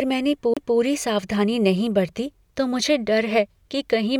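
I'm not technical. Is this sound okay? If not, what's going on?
No. Around 0.54 to 0.57 s there is a CD skip: the disc player's laser lost its place and jumped to a different point on the disc. The speech drops out briefly, then resumes mid-flow at "सावधानी नहीं बरती तो".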